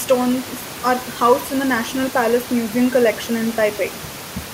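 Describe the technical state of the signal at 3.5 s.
At 3.5 s the signal is intact, with only the room's own background noise sitting about 17 dB below the speech.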